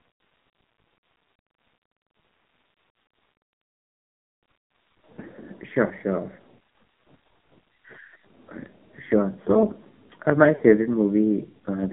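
A channel delay runs through the whole recording: one channel arrives a fraction of a millisecond behind the other, and when the two are folded to mono their shared content cancels at regularly spaced frequencies. Here the first notch falls somewhere around 3 kHz, so the upper part of the voice sounds hollow and phasey. Because the delay never changes, the coloration stays fixed rather than sweeping.

The speech has also passed through the AMR narrowband mobile codec. It is band-limited to roughly 150 Hz to 3.4 kHz, and the codec rebuilds each voice from a vocal-tract model driven by a few pulses per subframe. The damage is heavy, with a buzzy, synthetic edge, which fits one of the codec's low-rate modes near 5.9 kbps.

Lost AMR speech frames appear twice, each lasting about 40 ms. The first runs from 5.86 to 5.94 s, and the second from 10.56 to 10.63 s, right after "uh my". In both cases the decoder could not use the corrupted frames, so it repeated the last good pitch and spectral settings at falling gain. 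Each dropout sounds like a short smeared warble and dip, and the voice comes back rough for a moment.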